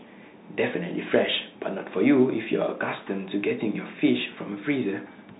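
Bluetooth CVSD headset codec throughout: one-bit up-or-down coding, which fits a 64 kbps link, removes everything above 3.8 kHz and leaves plainly audible grainy distortion on the speech.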